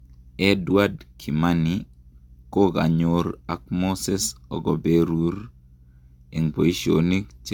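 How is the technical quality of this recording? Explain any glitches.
The recording is marked by generation loss running through the whole speech clip. The most likely cause is repeated lossy coding, with the audio decoded and re-encoded about three times, each pass quantising on a shifted frame grid so errors and spectral gaps accumulate. The character points to AAC-LC at around 96 kbit/s. It sounds swirly and hollow, consonant attacks are smeared, and nothing is present above 17.1 kHz.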